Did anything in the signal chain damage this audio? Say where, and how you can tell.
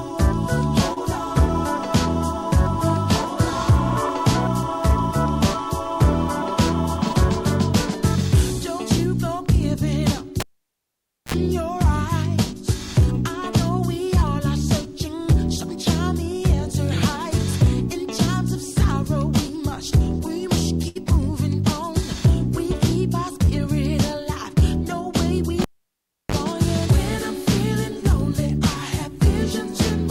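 Yes, in five places, and they come from two stages.

First, short concealed packet loss on the network side, at 0.93 s and again at 23.45 s. Each time about 20 ms of audio never arrived in time, and the receiver covered it by extending the previous sound for roughly 28 ms and 14 ms respectively before crossfading back into real audio. You hear it as a tiny smear or wobble rather than a dropout, because the gap got papered over.

Second, a cable pulled and plugged in, which is analogue wiring, twice. The first runs from 10.40 to 11.34 s: a pop, nearly 0.9 s of near silence, then a burst of 60 Hz mains buzz lasting about 54 ms while only the tip makes contact, and a second pop as the signal comes back. The second runs from 25.62 to 26.35 s, with about 0.69 s unplugged and roughly 34 ms of buzz, this time at 50 Hz.

Third, a burst of packet loss from 20.88 to 20.97 s, also network. This is a bigger hole than the short ones: about 80 ms went missing, and concealment stretched the last sound for around 70 ms while fading it down, so you get a held, decaying buzz or hiss. 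Then the audio picks up further along, with that stretch simply gone.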